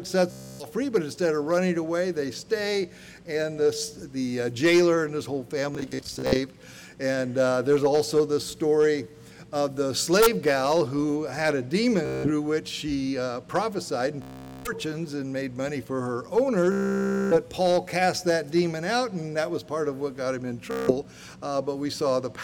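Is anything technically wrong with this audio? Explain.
Yes, there is Bluetooth stutter at 0.31–0.67 s, 5.75–6.38 s, 12.06–12.31 s, 14.22–14.72 s, 16.72–17.36 s and 20.71–20.92 s. Packets arrived late or not at all, so the receiver kept replaying its last short slice of audio, heard as a rapid buzzing, machine-gun repetition. The longest burst, at 16.72 s, covers about 0.59 s of missing sound. The one at 5.75 s is broken into scattered repeats, none longer than 61 ms. Unlike a plain dropout, the gap is filled with repeats rather than silence, and the sound resumes further on, skipping what was lost.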